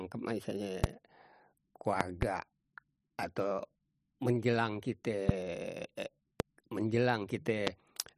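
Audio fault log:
0.84–7.70 s, loud pop: Short voltage pulses, likely from a plug, switch, static or driver glitch, enter the signal path at 0.84–0.86, 2.01–2.25 (two pops), 5.29–5.32 just after "atau menjelang", 6.40–6.42 and 7.67–7.70 s. The downstream circuits shape each pulse into a sharp thump peaking about 20 to 25 dB above the speech, which carries on beneath it. At 2.01 s the pulse sounds as a quick double pop.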